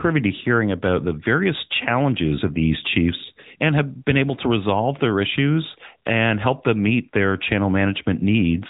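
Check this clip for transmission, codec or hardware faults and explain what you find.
The speech has been through the AMR narrowband mobile codec for its whole length. The 8 kHz vocal-tract model leaves nothing above about 3.8 kHz and gives plainly audible buzzy, synthetic damage, which fits the 10.2 kbps mode. A spectrogram shows a flat ceiling at 3.8 kHz.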